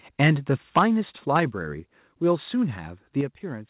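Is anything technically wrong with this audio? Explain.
Yes. Microphone overload occurs three times: 0.21 to 0.31 s, about 8 dB past the converter's limit; 0.76 to 0.84 s, about 7 dB over; and 1.35 to 1.37 s, about 2 dB over. The likely cause is an input level set so high that the loudest peaks ran into the converter's ceiling and were sliced flat. In the first two bursts a sizeable share of the waveform is flattened; in the third, only a small fraction. The result is a harsh, crackly edge on those loud moments, strongest in the first two.

Microphone volume stepped down happens at 0.79 s by about 3 dB, at 1.8 s by another 3 dB, and at 3.21 s by about 6 dB. Each is likely the call software reacting to an overly hot or clipping input by cutting the device gain in a single jump. The first step lands inside the second overload burst. At each point the voice and the background fall together abruptly, with no gradual fade, and the last drop is the largest.

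The call path's bandwidth stops at 4 kHz, which fits G.711 mu-law telephone coding.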